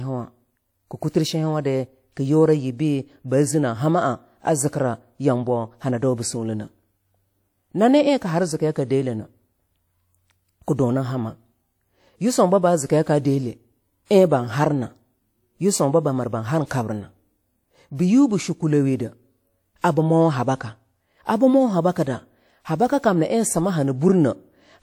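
Pre-echo appears twice in this speech recording: from 14.05 to 14.11 s, just before "ein ban", and from 16.66 to 16.71 s, just after "yisunba bamir ban har". A transform codec's quantisation noise, scaled for a sharp attack late in a block, spills into the quiet moment before it, leaving about 50 ms of hiss ahead of a softened onset. Channel delay (comb filtering) follows from 20.17 to 21.17 s, ending just before "abii mo". One channel lags by a few hundredths of a millisecond, which fits a single-sample offset. Summing to mono puts the first cancellation notch near 20 kHz, so the top end just sounds duller for that second.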